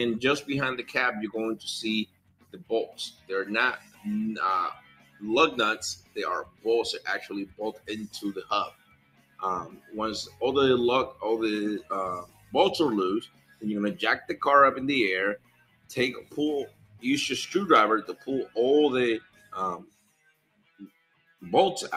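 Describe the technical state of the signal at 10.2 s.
At 10.2 s the sound pumps and thins as held parts sink and tails are cut short, because a speech-tuned noise suppressor left on is treating steady content as noise, with level swings of around 20 dB. The moment falls within a stretch of sound cut by the noise suppressor, running from 2.05 to 14.35 s and affecting about five seconds in total. Sustained and decaying sound dips by up to about 19 dB, while sharp onsets mostly survive.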